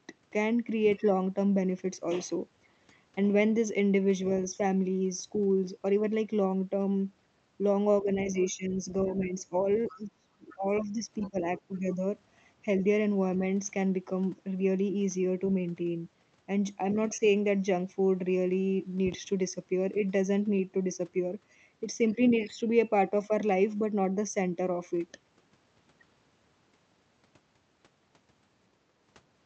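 Speech runs all the way through with a hollow, phasey colour. It's channel delay comb filtering: one channel trails the other by a fraction of a millisecond, so when they're folded to mono the shared content cancels at evenly spaced frequencies. The first notch sits around 1.5 kHz, and the repeats above it carve out the presence range. Between about 8 and 12 seconds the talker keeps getting ducked, which is speech suppressed in double talk: dips at 8.02–8.07 s, 8.33–8.88 s, 9.05–9.53 s, 9.91–11.36 s and 11.58–12.01 s. The shallow ones drop about 5 dB, and the deepest, in the long stretch from 9.91 s, goes down about 20 dB. It's likely the echo canceller couldn't tell the near talker from the far end's loudspeaker sound while both were going, so it pulled everything down together. In the same window you can catch faint scraps of the other side's voice leaking through at 8.29–8.44 s, 9.87–9.96 s and 11.21–11.30 s, sitting about 20 to 25 dB under the main speech. 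That points to the canceller not fully scrubbing the far-end playback out of the mic. Then at 19.07–19.16 s there's a loud pop, really two quick ones back to back, peaking about 5 dB over the speech while the talking carries on underneath. That's likely a sudden voltage step from a plug, switch, static discharge or driver hiccup landing on the signal.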